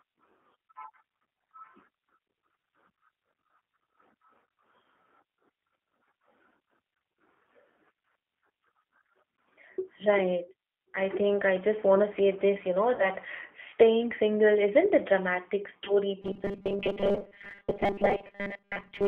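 The whole clip passes through the G.729 codec at 8 kbit/s. Its damage is plainly audible. The band is narrowed to a phone line, roughly 300 Hz to 3.4 kHz. Speech is rebuilt from a filter, pitch and a few pulses, so it sounds rough and slightly synthetic.

At 12.95 to 13.08 s, VoIP packet loss concealed by the speech codec occurs. About 40 ms of audio is missing, which fits two lost packets. The decoder guesses from its last frame and fades it. A stretched, fading sound follows, and the voice stays weak briefly. The same happens at 15.85 to 15.94 s, with about 20 ms lost, which fits one packet.

From 16.22 s to the end, robotic sound from repeated short buffers takes over. The speech becomes a rigid, metallic buzz at 200 Hz. The likely cause is a tiny buffer of about 5 ms being replayed. Most of the real audio is skipped in this stretch.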